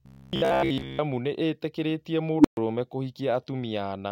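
From about 0.02 to 0.99 s, right before "nĩ itĩkĩrĩtie", the speech turns into a rigid metallic buzz at 66.8 Hz. That's robotic sound from repeated short buffers, likely a roughly 15 ms chunk being replayed while most of the real audio gets skipped.

Then at 2.38 s, just after "nĩ itĩkĩrĩtie", there's an unstable filter. A tone around 300 Hz swells over 66 ms into a loud squeal and clips, then the output overflows and drops to silence for about 128 ms, until 2.57 s.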